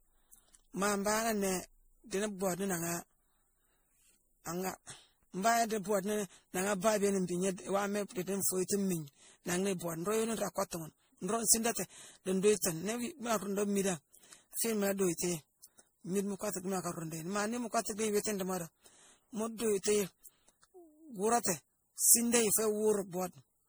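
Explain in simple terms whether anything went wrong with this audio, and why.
Something did go wrong, and it affects the whole recording from start to finish. The speech has a swirly, watery texture, sounds hollow and smeared, and the sharp starts of sounds are blurred. That is generation loss, most likely from being compressed as MP3 around seven times over. Each round of saving throws away a little more detail in a slightly different place, so the damage piles up beyond what a single save would cause.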